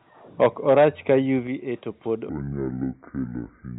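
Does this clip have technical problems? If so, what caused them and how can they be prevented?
Yes. From 0.41 to 1.15 s there is microphone overload: peaks push about 7 dB past the converter's limit, and a few percent of samples are flattened, giving a harsh crackle. The waveform shows squared-off tops, and the spectrogram shows smeared broadband energy. The likely cause is input gain set too high. Lowering the microphone's input level before recording prevents it.

The microphone volume is stepped down twice: by about 2 dB at 0.46 s, inside the distorted stretch, and by about 6 dB at 1.47 s, just before "to pod". The likely cause is call software reacting to the overload. On a waveform the envelope drops abruptly, and on a spectrogram all energy dims together. Turning off automatic gain control and setting a sensible fixed level prevents it.

From 2.29 s, right after "to pod", to the end, a section at the wrong speed plays at 0.613 times normal. 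The sound is slow and roughly ten semitones lower. On the spectrogram, harmonics sit compressed lower, and the waveform's features stretch out in time. A likely cause is playback against a mismatched clock. Matching the playback and recording clock rates prevents it.

The sound stays band-limited to 4 kHz throughout, as expected from the G.711 call path.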